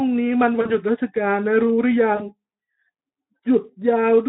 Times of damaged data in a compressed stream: none

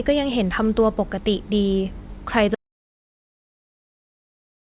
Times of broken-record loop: none

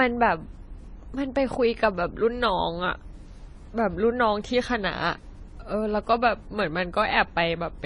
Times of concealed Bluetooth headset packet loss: none

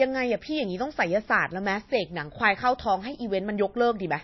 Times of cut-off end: none

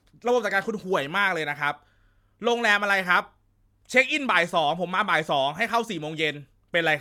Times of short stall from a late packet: none

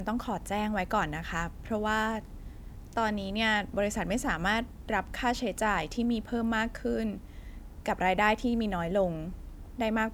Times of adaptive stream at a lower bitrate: none

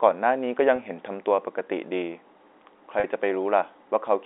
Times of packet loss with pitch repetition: 0.76-0.78, 3.00-3.04

